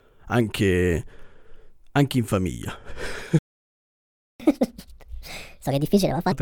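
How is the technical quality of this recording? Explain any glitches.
The recording has two linked playback glitches in this speech.

Playback stall, 3.39 to 4.40 s: the audio cuts to silence for about one second, then resumes. The player likely ran out of buffered data or was blocked.

Catch-up at higher speed, 4.40 to 6.32 s: the speech runs fast and noticeably higher, by roughly seven semitones, at 1.5 times normal speed. The player is resampling its backlog to recover the lost second.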